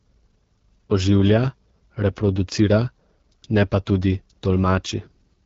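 Throughout, the AMR wideband (HD Voice) codec is audible: speech sounds rough and raspy, consistent with a low rate around 8.85 kbit/s, with noise-filled highs above 6.4 kHz.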